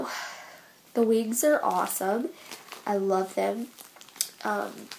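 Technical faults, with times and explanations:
No technical faults can be heard in this audio, so there are no times or explanations to give.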